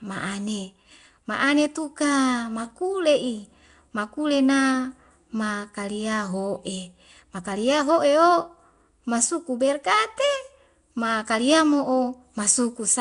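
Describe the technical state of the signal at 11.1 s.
At 11.1 s, as throughout, the speech likely went through Nellymoser compression: starved bands are noise-filled, leaving a rough, hissy, underwater smear and nothing above 10.6 kHz.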